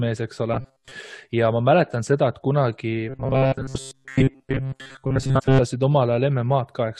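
From 0.54 to 0.93 s, and again from 3.09 to 5.60 s, the speech turns into a stiff metallic buzz at 133 Hz: robotic sound, likely from repeated short buffers, with a tiny chunk of roughly 7.5 ms looping while most of the real audio gets dropped. Inside that second stretch there are two compressed frames skipped events. At 3.74 s, about a tenth of a second vanishes, and at 5.38 to 5.40 s, around 150 ms goes. Each skip lands as a sudden jump ahead, with several codec frames going missing at once.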